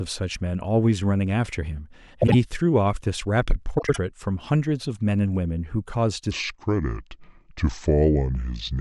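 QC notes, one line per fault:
2.22–2.35 s and 3.78–3.98 s, frames out of order: in each stretch two neighbouring blocks, about 52 ms and 78 ms long, play swapped. This points to a few codec frames decoded out of sequence, giving a brief garbled flutter and no lost time.
6.31 s to the end, section at the wrong speed: speech plays at 0.697 times its recorded rate, so speed and pitch drop together, by roughly seven semitones, and the voice turns slow and deep. The likely cause is this section being clocked against the wrong rate.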